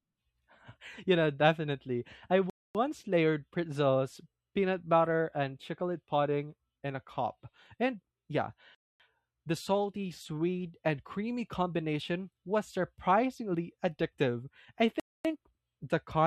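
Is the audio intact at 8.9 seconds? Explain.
No. A hard-edged 250 ms hole of silence runs from 8.75 to 9.00 s: a gap between chunks, where silence is left at the join before the next 6-second chunk.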